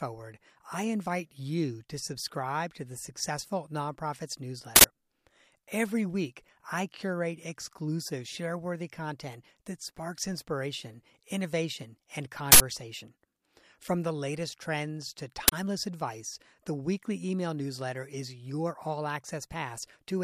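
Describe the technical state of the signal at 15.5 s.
A short, harsh burst of loud digital noise cuts in from 15.48 to 15.52 s, between "the latest trends to" and "advice the weekly email". This is an uninitialised buffer: a 40 ms block was played out before any audio was written into it, so stale memory contents were reproduced as samples.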